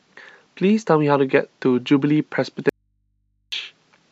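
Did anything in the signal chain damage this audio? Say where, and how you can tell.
Yes: an audio dropout to a faint residue from 2.69 to 3.52 s, likely an intermittent analogue connection. For about 0.83 s the speech cuts out abruptly and leaves only mains hum, roughly 50 dB down, as an open, still-live input picks up hum instead of signal.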